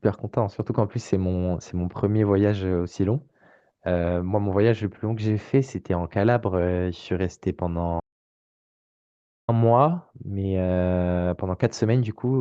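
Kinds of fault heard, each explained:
Audio dropout to silence: the speech cuts off at 8.00 s into dead silence, no room tone, for about 1.5 s, likely a lost input link.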